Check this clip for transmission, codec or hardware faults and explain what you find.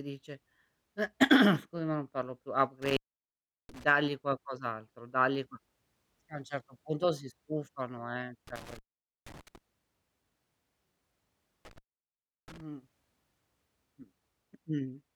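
The speech shows one hardware fault. Intermittent contact at 2.82–3.84 s, 8.47–9.58 s and 11.65–12.61 s: a loose connection opens for about 0.73 s, 0.48 s and 0.70 s, cutting the sound with crackle at each edge.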